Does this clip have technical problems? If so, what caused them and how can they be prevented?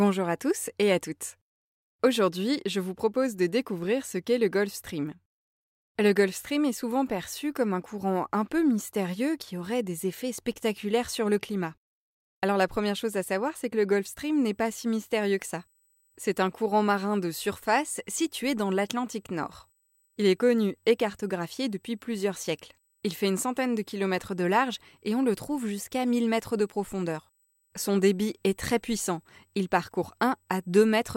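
Yes. From 13.93 s, just after "savoir c'est que le", to the end, USB whine sits about 35 dB below the speech. It is a fixed 8 kHz tone, strongest at 16 kHz, caused by 125-microsecond microframe current pulses leaking through power or ground. A USB isolator or separately powered interface prevents it.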